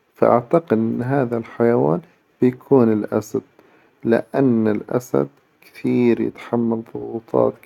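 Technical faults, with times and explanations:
No technical faults can be heard in this speech recording. Nothing in the audio calls for a time or an explanation.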